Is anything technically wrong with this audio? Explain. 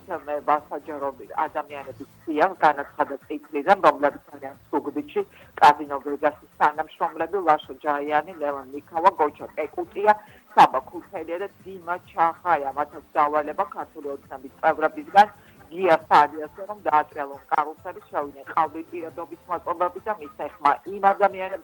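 No, no technical faults here.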